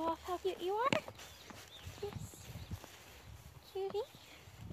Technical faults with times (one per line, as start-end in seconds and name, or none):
0.44 compressed frames skipped
2.57 compressed frames skipped